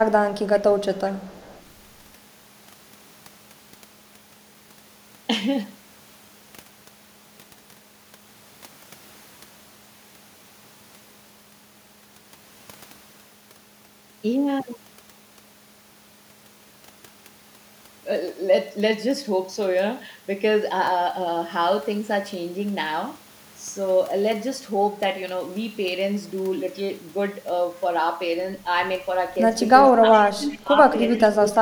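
From 0.95 to 1.62 s a faint copy of the speech trails 393 ms behind, far below the direct level. This is echo leak, likely from a far-end echo canceller letting loudspeaker pickup through. Near the end the speech briefly dips by about 10 dB at 29.99 to 30.04 s, the speech suppressed in double talk, likely because a canceller muted its own talker while both sides spoke. A louder echo scrap at the same 393 ms delay follows at 30.13 to 30.19 s. From 30.24 to 30.82 s the speech drops again, deeply, by up to roughly 25 dB, while a faint echo fragment surfaces at 30.51 to 30.57 s. Another faint echo follows at 31.09 to 31.25 s, and a last small dip of about 10 dB comes at 31.39 to 31.55 s.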